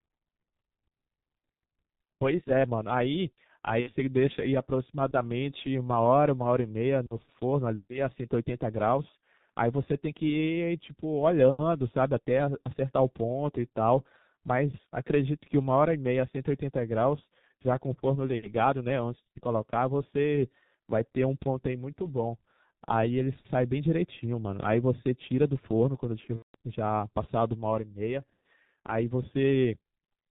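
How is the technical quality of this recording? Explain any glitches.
The recording is technically poor: it is muffled and hoarse throughout, with two short dropouts in the speech.

Across the whole clip nothing above about 4 kHz comes through, consonants smear together, and the voice has a rough, hoarse edge. That is the G.723.1 codec, an early internet-telephony coder working on 30 ms frames at a very low rate, which fits about 6 kbit/s. At that rate it models the voice coarsely and updates the model slowly, so fine detail and high frequencies are lost.

At 3.81 to 3.89 s, and again for longer at 26.36 to 26.55 s, the speech turns into a fading, stretched smear and takes a moment to recover. This is VoIP packet loss concealed by the speech codec. The gaps point to about 60 ms and 180 ms of missing audio, two and six 30 ms frames. The decoder filled each gap by extending its last pitch and spectral shape while lowering the level frame by frame. 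Each new frame builds on that degraded state, so the voice sounds weak for a short while after the audio returns.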